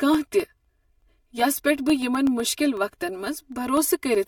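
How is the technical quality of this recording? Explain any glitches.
Technical quality is compromised by two faults in the speech.

Channel delay (comb filtering) runs throughout: one channel lags by roughly 3 ms before mono summing, cutting evenly spaced notches from about 150 Hz, so the sound is hollow and phasey.

Periodic USB or driver dropouts occur from 0.15 s to 4.15 s, every 0.125 s. Each replaces about half a millisecond with silence, heard as regular ticks during speech.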